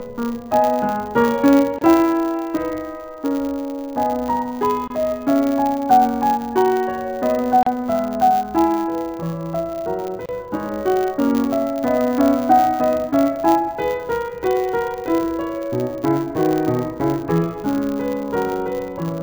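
A filter restarted on every block runs through the whole piece of music, putting a level-following 100 Hz buzz under it. On a spectrogram this appears as faint vertical stripes every 10 ms. A gap at a join of encoded pieces, where leftover encoder delay and padding silence sit between separately encoded sections, opens at 1.79 s (28 ms), 4.88 s (26 ms), 7.63 s (36 ms) and 10.26 s (31 ms). Each is a brief dropout with softened edges, showing as a narrow flat notch in the waveform and a blank column across the spectrogram.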